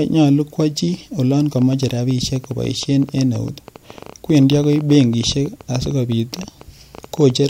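From about 1.59 s to 7.31 s there's a train of clicks riding over the speech, roughly ten a second at an uneven pace, around fifty in all, peaking near the speech level. It's likely interference from nearby gear or a faulty connection or power supply, ticking through the pauses too.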